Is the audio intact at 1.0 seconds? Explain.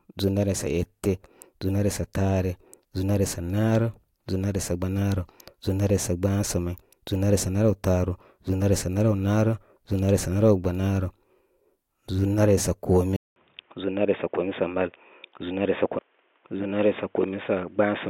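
Yes, the audio is intact at 1.0 seconds, with no audible fault at that moment.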